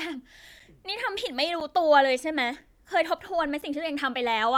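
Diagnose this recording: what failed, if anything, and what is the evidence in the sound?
Gap between chunks at the playback stage: 7 ms holes at 0.60, 1.60, 2.61 and 3.62 s, one per 1.0 s chunk, showing as thin blank vertical stripes.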